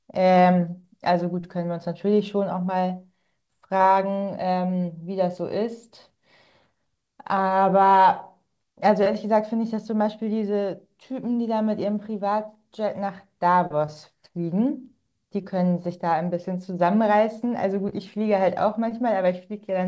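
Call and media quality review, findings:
Short concealed packet loss in the receive path: about 20 ms of audio at a time missing from the jitter buffer, gaps filled by decoder concealment extending the previous sound, then crossfaded back. Audible as brief smears or wobbles at 0.82–0.85, 3.77–3.81, 9.03–9.08, 13.86–13.89, 15.41–15.45 and 17.89–17.94 s. Call-path band limit at 8 kHz, consistent with a wideband call codec.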